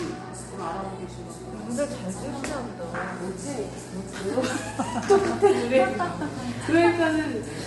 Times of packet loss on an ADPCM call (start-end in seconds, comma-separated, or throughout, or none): none